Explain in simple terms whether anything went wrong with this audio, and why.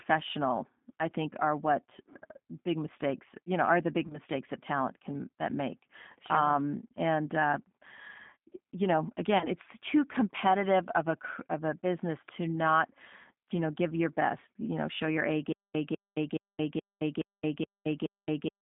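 G.729 codec, throughout the whole clip: the call passed through a low-rate phone codec that rebuilds speech from a simple model of the voice rather than sending the sound itself. Nothing above about 3.5 kHz survives, so the speech sounds muffled, slightly rough and artificial.

VoIP packet loss concealed by the speech codec, at 4.07 to 4.18 s and again at 9.38 to 9.48 s: each time, about 30 ms of audio went missing in transit. The decoder filled the hole by stretching the last sound into a fading buzzy tone or noise, and the voice stays weak and smeared for a moment afterwards.

Stutter with silent gaps, from 15.53 s to the end: a burst of about 0.2 s plays, then about 0.22 s of dead silence, repeating every 0.42 s, seven times. The likely cause is a stalled player or stream replaying its last fragment at each retry, so the audio that should have followed is lost.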